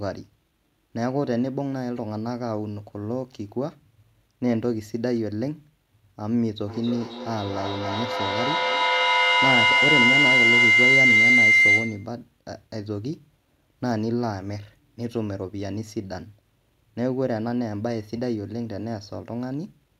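From 6.68 to 12.17 s, feedback howl: a mic-to-speaker loop gains each pass, building a tone near 2 kHz, pulsing roughly every third of a second, peaking about 8 dB above speech.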